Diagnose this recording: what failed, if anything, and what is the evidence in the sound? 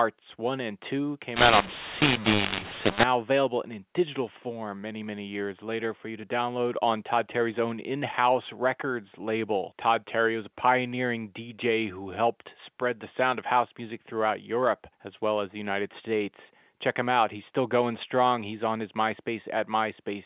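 Codec stage: from 1.36 to 3.03 s, just before "available in digital form", the speech turns harsh and gritty, the pauses fill with noise, and levels jump about. This is mu-law and A-law mixed up, with A-law telephone data decoded as mu-law.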